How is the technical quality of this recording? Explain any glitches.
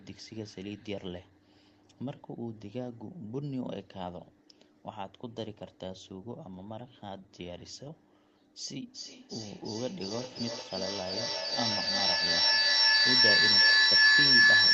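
The recording is spoiled by a feedback howl in its second half, running from 8.94 s to the end of the clip. The speech before it is band-limited to about 8 kHz, as a call codec does.

From 8.94 s a feedback howl builds, peaking about 15 dB louder than the speech. Two devices in the same room on one call send the sound from loudspeaker to microphone and back, and each pass adds level. So a tone around 1.5 kHz swells, pulsing roughly every third of a second with the loop's delay. An echo would fade, but this keeps growing.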